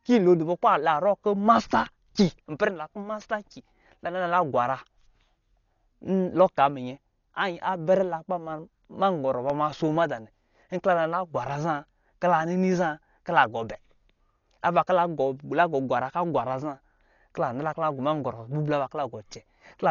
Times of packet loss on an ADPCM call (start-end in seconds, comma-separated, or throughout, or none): none